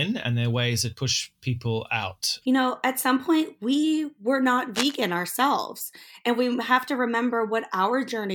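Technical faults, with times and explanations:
4.74–4.95 s, cable scratch noise: for about a fifth of a second a dense, ragged scratching rustles over the speech, nearly as loud as the voice itself and uneven in texture rather than a steady hiss. This is likely a worn cable, connector or control being moved during recording; as the contact shifted, its resistance jumped around rapidly, injecting irregular bursts of noise into the signal that stopped once the contact settled.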